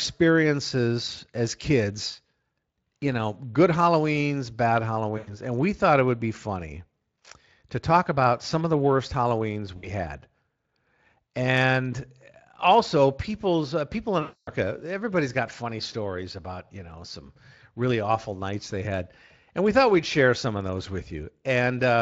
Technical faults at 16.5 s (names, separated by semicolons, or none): none